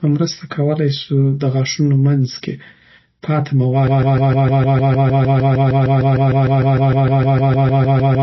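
Speech with a watery, swirling quality and nothing at all above 5.8 kHz. On a spectrogram this shows as a flat ceiling with patchy, flickering holes below it. The likely cause is heavy MP3 compression at a low bitrate, around 24 kbps. From 3.87 s to the end, a broken-record loop takes over. A 0.15 s fragment repeats back to back, so the waveform becomes identical blocks tiling every 0.15 s and the spectrogram shows a rigid repeating stripe pattern. This is likely a stalled stream resending its last fragment, so the speech that should follow is lost.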